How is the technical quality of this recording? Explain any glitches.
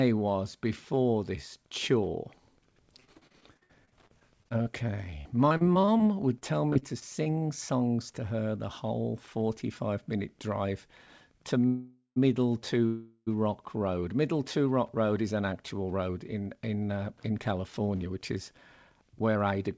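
The recording is a speech call with several clear network glitches; the sound stops around 8 kHz, which fits a wideband call codec.

From 3.00 to 7.28 s, just before "songs to her the", the speech turns choppy and robotic. This is repeated packet loss: about thirty short holes, the longest 59 ms, each patched by stretching the previous sound. Roughly 17% of that stretch is concealment, so pieces of speech are missing.

At 11.67 to 12.18 s, right after "minute drive to", and again at 12.86 to 13.29 s, the sound hangs as a fading buzz, with brief silence of about 100 ms and 40 ms. These are call audio freezes, likely caused by delayed packets draining the jitter buffer. The speech then resumes where it stopped, so a pause is inserted but nothing is lost.

From 15.91 s to 19.68 s, after "is an actual", the speech sounds hurried at unchanged pitch, running at 110% speed. This is a jitter buffer speed-up: the receiver trimmed tiny pitch-period slices, about 0.4 s in total, to reduce built-up delay.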